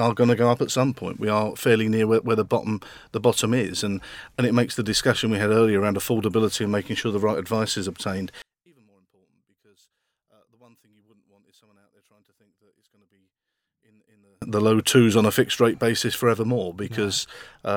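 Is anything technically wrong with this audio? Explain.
Yes. From 8.42 to 14.42 s, after "right advice is obtained", the speech drops about 38 dB to a faint remnant, recovering at "the low twos on". The likely cause is one channel inverted: with reversed polarity on one side, the centred voice cancels in a mono sum, leaving only the slight difference between channels.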